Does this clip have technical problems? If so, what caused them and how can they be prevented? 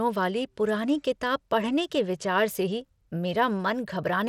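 Yes. Throughout the speech there is a gritty, coarse texture, with the treble flickering and nothing above 17.4 kHz, likely from Bluetooth SBC compression at a starved bitrate, which fits roughly 96 kbps. Its crude sub-band quantisation gives grit and aliasing rather than the swirly, watery artefacts of MP3. Recording over a cable, or over a Bluetooth link using a higher SBC bit pool or a better codec, would prevent it.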